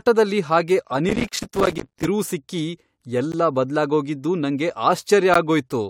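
From 1.09 to 2.08 s, processor overload crackle: the processor repeatedly fails to finish its small audio buffers, each only a few milliseconds long, and dozens of deadlines are missed. Every miss drops in a brief hard-edged silence, so the speech is torn by gritty crackle until the load eases.

Inside that stretch, from 1.29 to 1.32 s, comes the first gap between stream segments. Time stamps on the 2-second segments leave a hole that the player fills with silence, here about 27 ms. The same hard-edged dropout returns at 3.32 s, about 15 ms, just before "ಬದ್ಲಾಗೋಗಿದ್ದು ನಂಗೆ", and at 5.34 s, about 14 ms, recurring every two seconds.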